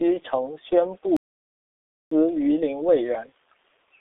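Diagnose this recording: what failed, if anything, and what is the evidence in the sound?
Codec stage: the whole clip is G.723.1, squeezed to a 300 Hz–3.6 kHz phone band at 6.3 kbit/s, nothing above 4 kHz, so speech comes out muffled, hoarse and smeared.

Playback stall at 1.17 s: right after "承宣" the audio drops out for about 0.95 s, picking up at "榆林卫" at 2.11 s, likely a player buffer running dry.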